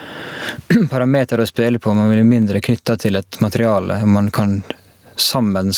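Throughout the speech, the likely cause is input gain set far too high for the microphone, with a fast limiter or compressor clamping it down on every loud syllable. That produces gain pumping, with the gain swinging by about 25 dB, so levels sound squashed together.

At 2.42 s the waveform's zero line jumps abruptly, a DC step, and the offset then bleeds away through a 20 Hz high-pass. It is heard as a single low thump or click, while the speech carries on unchanged through it.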